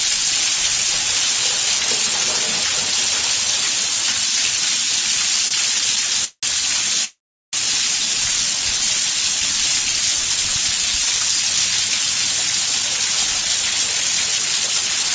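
The audio has come through a call link whose sound stops at 8 kHz, consistent with a wideband G.722 codec at 64 kbps, and it shows three delivery faults. From 5.48 to 6.45 s, packets arrived late repeatedly and the jitter buffer ran dry four times, producing repeated stalls (stutter): about 0.23 s of stretched sound, the longest hold 182 ms. At 7.05 to 7.55 s a call audio freeze follows, likely from packets held up in transit, where the last sound trails off into roughly 0.4 s of silence, inserting 483 ms. From 12.43 s to 15.10 s a jitter buffer speed-up trims short pitch-period slices, around a third of a second in total, so the audio runs at 111% speed at the same pitch and sounds hurried.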